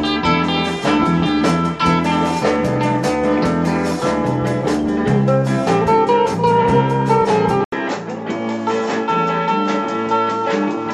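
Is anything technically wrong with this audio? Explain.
Yes. At 7.64 s, after an 80 ms gap, the sound turns duller to the end, likely an input switched to a poorer device. The spectrogram shows nothing above 7.7 kHz and a faint new noise floor, with no change in waveform level.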